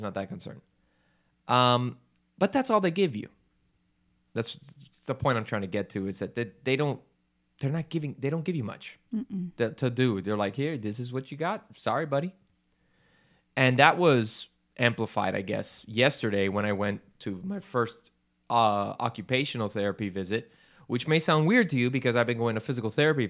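No technical faults can be heard anywhere in the recording; the speech signal stays continuous and stable throughout.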